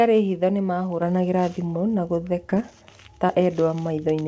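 A speech recording carried over a call, with nothing above about 8 kHz, as a wideband call codec such as G.722 would leave it. At 1.02 s the microphone volume is stepped up. Voice and background jump together by about 5 dB in one instant. That points to the call software judging the input too quiet and raising the device's input gain in a single step. Two short concealed packet losses follow, at 2.50 to 2.53 s and at 3.27 to 3.31 s. Each is a brief smear where roughly 20 ms of audio never arrived in time. The decoder covered the gap by extending the preceding sound, then blended back into the real signal. A short consonant in either spot can be lost.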